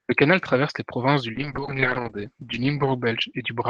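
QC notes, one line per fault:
1.35–3.69 s, call bitrate drop: after "traverse les provinces du" speech turns rough and muffled, top narrowing from 12 to 8 kHz, fitting Opus falling from 32 to 8 kbps.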